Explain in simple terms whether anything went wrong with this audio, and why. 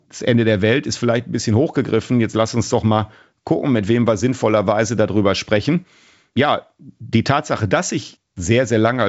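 Nothing went wrong here: the speech has passed through G.722 wideband telephone coding working as intended, which simply leaves no sound above about 7.7 kHz, a normal limit of this kind of phone connection rather than a fault.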